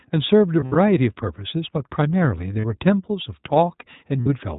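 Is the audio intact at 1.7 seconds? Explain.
No. At 1.7 seconds the speech carries iLBC codec damage, which runs through the whole clip. The sound has been squeezed through a narrowband VoIP coder, so nothing above 4 kHz survives and the speech turns dull and boxy. Each short block is coded on its own, without leaning on the one before, and the rough, slightly synthetic texture fits 20 ms frames at around 15.2 kbps. The damage is plainly audible.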